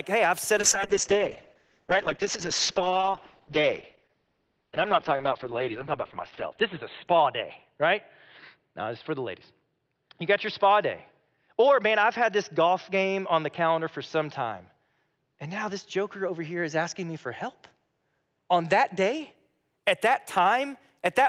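Call bitrate drop, 0.59 to 19.41 s, after "hey I've set": the starved encoder discards everything above 4 kHz, leaving rough, muffled sound that fits roughly 7 kbps.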